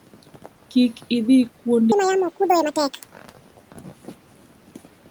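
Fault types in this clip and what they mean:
Speech cut by the noise suppressor: The suppressor mistook parts of the speech for background and turned them down with it. From 0.07 to 0.46 s and again from 3.15 to 4.13 s, soft sounds fade, dropping by about 12 and 13 dB. Roughly 150 ms and 400 ms are affected.
Section at the wrong speed: From 1.92 to 3.04 s the speech plays 1.89 times too fast. Pitch rises with it, by nearly an octave, so the voice turns high and hurried. The likely cause is playback against the wrong clock.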